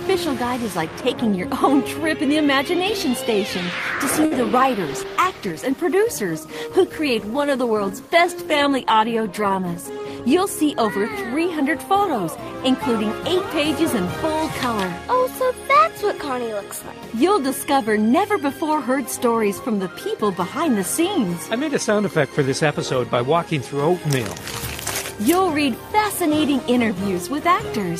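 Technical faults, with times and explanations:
4.25 to 4.33 s, short stall from a late packet: a packet arrived late and the receiver stretched the preceding sound for about 58 ms instead of dropping anything, so the sound hangs briefly with a slight buzz or dip. On a spectrogram, the frequency bands run flat and smeared across that gap, and timing lags slightly afterwards.
4.89 to 11.12 s, call bitrate drop: the bandwidth estimate fell and the encoder was forced to code far more coarsely, which fits a fall from 48 to 15 kbps, held at the lowest for about 4.9 s. The sound turns rough and muffled. A spectrogram shows the upper frequencies abruptly cut away and blotchy, smeared detail below until recovery.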